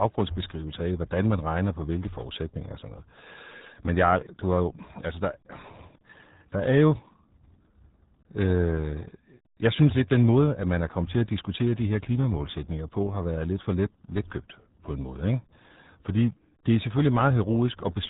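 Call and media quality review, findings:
Muffled, gargly speech throughout; no content above 3.8 kHz; heavy codec damage. Probable component: RealAudio 14.4 (RealAudio 1) encoder, consistent with an 8 kbit/s dial-up speech codec discarding upper band and coarsely modelling the remainder.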